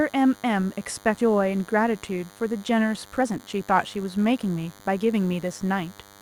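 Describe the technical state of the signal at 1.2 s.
At 1.17 to 1.19 s the sound jumps abruptly forward, with about a second of material simply gone and the two sides butted together with no silence between them. This is a skip ahead: queued audio was discarded, likely by an overflowing jitter buffer, so playback resumed from later material.

Under this, a thin, steady buzz sits about 25 dB below the signal, pitched at 100 Hz and rich in harmonics. This is DECT cordless phone buzz: a nearby handset or base station transmits a radio burst every 10 ms, and the audio circuitry rectifies it into an audible tone.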